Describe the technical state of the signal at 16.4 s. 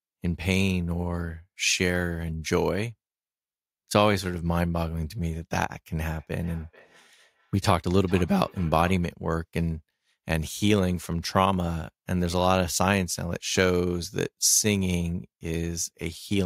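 At 16.4 s the speech signal is intact, with no audible fault at that moment.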